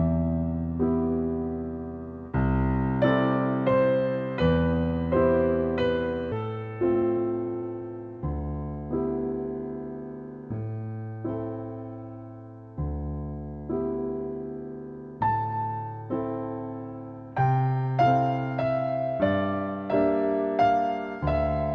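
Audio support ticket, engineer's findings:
Skip ahead at 6.32 s. Around 0.4 s of sound is missing, with no fill. Playback jumps forward and the two sides are butted together. Probable component: the jitter buffer discarding queued audio on overflow, or loss in transit. Waveform shows an abrupt splice with mismatched envelope and no silent gap. Spectrogram shows a hard vertical seam where the harmonic patterns change instantly.

Jitter buffer speed-up from 6.42 to 8.41 s, at 109% speed with pitch unchanged. Sounds hurried. Probable component: the jitter buffer trimming excess delay after the skip by cutting pitch-period-length chunks repeatedly, removing about a fifth of a second in total. Spectrogram shows harmonic spacing steady while events compress in time. Waveform shows periodic segments shortened, with small repeated splice points.

The G.722 call path at 64 kbps leaves nothing above 8 kHz on the spectrogram throughout.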